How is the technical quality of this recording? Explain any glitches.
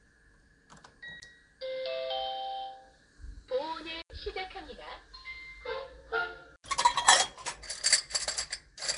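The recording is technically compromised in two ways: a low-grade codec colours all of it, and three brief dropouts break it up.

Throughout, the damage most likely comes from Nellymoser compression, the old Flash microphone codec. It gives each short block of audio a fixed, small bit budget, so weaker bands get no real data and are filled in with synthetic noise. The result is a plainly audible rough, hissy haze and a smeared, underwater texture. Nothing is present above 10.6 kHz, and the thin, grainy character suggests a rate of around 44 kbps.

The three glitches are blocks of digital silence, where a run of samples became zeros. The first, from 1.20 to 1.22 s, lasts 20 ms. The other two, from 4.02 to 4.10 s and from 6.56 to 6.64 s, each last 80 ms and are heard as short holes. The audio drops to zero and returns with no fade, so the edges are abrupt.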